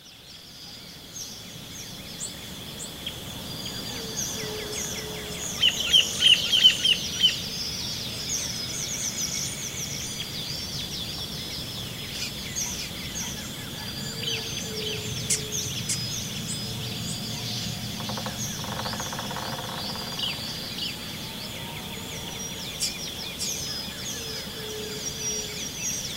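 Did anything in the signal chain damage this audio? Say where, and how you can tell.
Yes. Throughout the clip every sound is followed by a doubled audio track: one full-band copy about half a second behind, roughly 5 dB quieter. The cause is likely a second, slower capture path in the driver or routing stage, or an edit leaving two copies out of step. This isn't room echo or a reverb tail. The repeat happens only once, with no decay, no tonal colouring, and a fixed delay.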